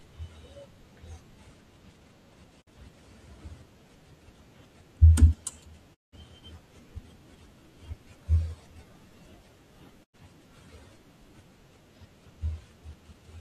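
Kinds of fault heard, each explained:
Digital broadcast dropout: the receiver muted on lost frames, so the speech fades to silence in three short holes, about 43, 171 and 85 ms, visible as blank gaps in waveform and spectrogram.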